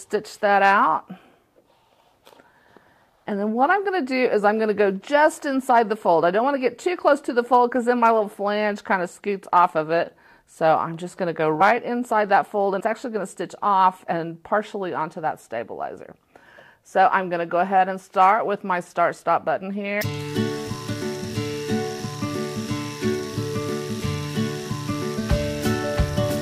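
At 11.6 s, 12.8 s and 25.17 s, compressed frames are skipped: a run of frames never plays, and the sound jumps ahead by roughly 50 to 70 ms. Unlike a dropout, no silent gap appears.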